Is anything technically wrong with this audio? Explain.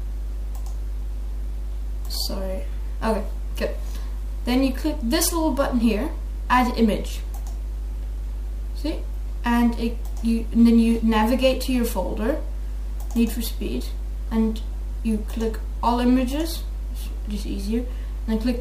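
No, nothing technically wrong can be heard in this audio. There is no problem to point to at any moment of the recording.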